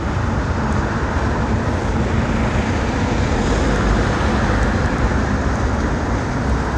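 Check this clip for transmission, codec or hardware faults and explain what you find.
No transmission, codec or hardware faults can be heard; the signal stays continuous and stable throughout, with no interruptions, level jumps or added artefacts.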